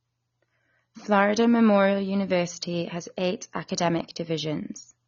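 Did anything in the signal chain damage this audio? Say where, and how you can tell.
Yes. AAC compression damages the speech throughout, at the codec stage: nothing is present above 7 kHz, and the sound is dull with a fizzy, warbling smear on sibilants. The likely cause is an AAC-LC encoder starving its frequency bands at a low bitrate, consistent with about 24 kbps.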